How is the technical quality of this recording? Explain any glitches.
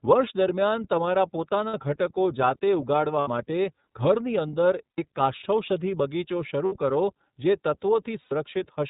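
Quality's limited: the whole clip has gone through the iLBC codec, with a handful of brief dropouts on top.

The iLBC codec damage runs throughout and is plainly audible. Everything above 4 kHz is gone, so the speech sounds narrowband, a bit rough and synthetic. That's the narrowband VoIP coding working on short standalone chunks, which fits 30 ms frames at roughly 13 kbps.

Then there are lost iLBC frames at 1.68, 3.21, 4.90, 6.65 and 8.22 s, lasting about 60 ms each, except about 90 ms at 4.90 and 8.22 s. The decoder fills each gap by repeating the last pitch cycle blended with noise, so you hear a held, slightly buzzy vowel before the speech snaps back cleanly.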